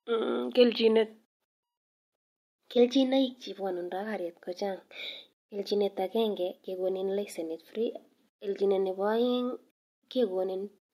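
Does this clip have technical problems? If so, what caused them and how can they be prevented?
No technical faults are audible.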